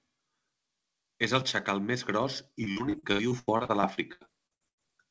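From 2.64 s to 4.82 s, just after "el xacal més gros", the speech breaks up with repeated packet loss, giving a robotic sound. About 19 gaps open in quick succession, the longest 90 ms, and each is bridged by stretching the last good sound, so roughly a third of that stretch is synthetic fill. The result is choppy, with pieces of syllables missing. The call path's band limit holds throughout, with nothing above 8 kHz, consistent with a G.722 codec.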